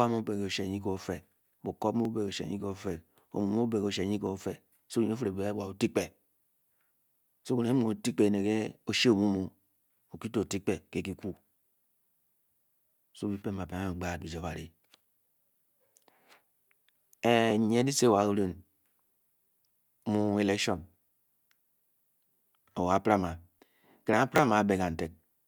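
From 2.05 s to 24.13 s the speech carries a regular click, about ten in all, spaced every 2.21 s. This steady spacing points to clock drift buffer slips. The likely cause is two devices running on separate clocks that disagree by roughly 700 ppm, so the buffer between them creeps until a small block of samples, on the order of 70, is dropped or repeated. A random glitch would not keep that metronomic rhythm.

At 24.36 to 24.39 s there is a brief garbled flick where chunks are out of order. One 10 ms chunk plays two chunks late, after the audio that should follow it. No sound is missing, only misplaced, so the moment sounds scrambled rather than gapped. It is a single isolated event with three hard joins, where a buffer slip is one click repeating on a schedule.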